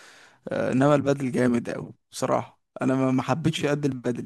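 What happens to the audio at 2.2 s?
Nothing goes wrong at 2.2 s; the speech plays through that moment intact, with no dropout, click or distortion.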